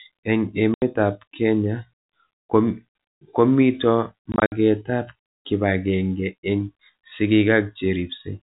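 At 0.74 s and again from 4.32 to 4.52 s, just before "ab kipag'eng'e eng'", there's packet loss filled with silence. Lost packets are replaced by dead air, leaving hard-edged holes. The first is one 80 ms gap. The second scatters about 120 ms of dropouts, longest 60 ms, consistent with 20 ms packets, all over narrowband G.711 audio.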